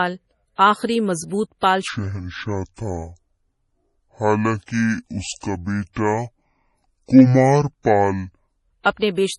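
A speech recording with heavy codec damage throughout. The sound is watery and swirly, and nothing is present above 11.4 kHz, which points to MP3 compression at a low bitrate, about 32 kbps. Starved of bits, the encoder drops weak frequency lines frame by frame and cuts the top band. From 1.88 s to 8.63 s the audio runs slow and deep, at 0.568 times normal speed with pitch roughly ten semitones lower. Speed and pitch fall together, likely from a section played or resampled against the wrong clock. At 8.82 s to 8.85 s there is pre-echo: a hiss spreads about 38 ms ahead of an attack, because the codec distributed its quantisation noise across the whole block, including the quiet moment before the onset, which also softens the attack.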